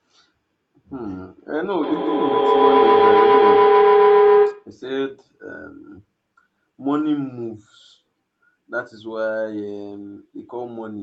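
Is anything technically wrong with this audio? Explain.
Yes, there's a feedback howl from 1.83 to 4.78 s. Two devices on the same call in one room feed each other, and each trip round the loop adds level. It narrows to a tone near 400 Hz, with the loop repeating about every tenth of a second, peaking about 11 dB above the speech.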